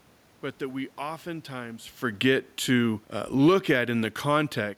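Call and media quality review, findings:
Automatic gain falling, 2.1 to 4.73 s, after "but that we oftentimes". AGC judged input too loud. Speech and room noise sink together, about 5 dB.

Automatic gain rising, 3.64 to 4.07 s. Input dropped about 15 dB. AGC raised gain about 4 dB, so speech and background swell together.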